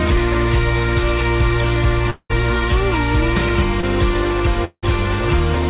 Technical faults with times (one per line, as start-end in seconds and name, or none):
2.10-2.31 long network dropout
3.81-3.85 short concealed packet loss
4.65-4.84 long network dropout